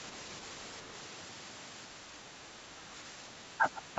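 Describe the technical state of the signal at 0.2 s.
At 0.2 s the speech signal is intact, with no fault present, only the ordinary band-limiting of call microphone processing, which trims the lowest bass.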